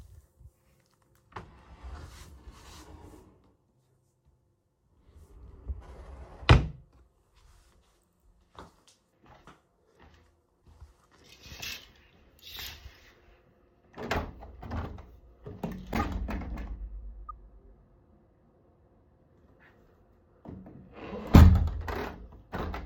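At 15.94 to 16.05 s, a corrupt frame decoded produces a burst of misplaced energy, its length pointing to roughly three damaged frames played as if valid. Flipped bits made the decoder misread gains and spectral codes, so energy lands at the wrong frequencies for about the length of the damaged frames. A much quieter corrupt frame decoded follows at 17.28 to 17.30 s. A spectrogram would show brief vertical smears unrelated to surrounding content, and the waveform a sudden spiky envelope.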